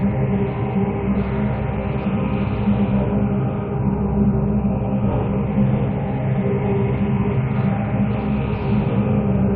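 The clip is a recording of sounds. No technical fault can be heard anywhere in it.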